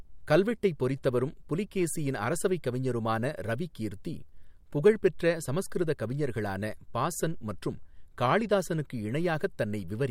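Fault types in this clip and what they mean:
No faults detected in this speech recording.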